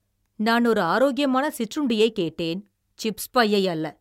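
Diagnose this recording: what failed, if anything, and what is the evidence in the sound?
Nothing failed here, and the sound gives no evidence of a fault at any stage of the recording chain.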